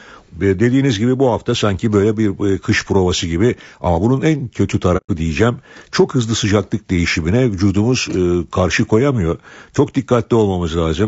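Speech throughout, and the whole clip has that rough, grainy texture you get from low-bitrate coding, with noise filling in between the harmonics and a top band that sounds thinned out and a bit synthetic. That's most likely low-delay AAC compression, AAC-ELD, the sort used on video calls. It codes about 500 frequency lines a frame with a low-delay window, and the damage here is plainly audible, which fits a rate somewhere around 32 kbps. Then there's a dropout from 4.97 to 5.10 s, right after "ama bunun en kötü" and before "diyeceğim çok hızlı sıcaklık". That's AAC frame loss with muting. The decoder zeroed out the missing spectrum, and the overlapping windows fade the sound down and back up, so you hear a soft-edged hole of roughly 120 ms, which points to about four frames going missing.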